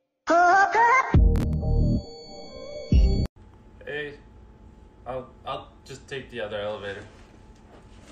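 A short burst of gritty, tearing crackle sits on the sound from about 1.36 s to 1.53 s, a rapid run of tiny dropouts with hard edges. This is processor overload crackle: the processor fell behind and missed around seven buffer deadlines in quick succession, and each missed buffer left a gap of silence a few milliseconds long. Because those clipped gaps arrive so close together, they fuse into a brief rasp that ends once the load eases.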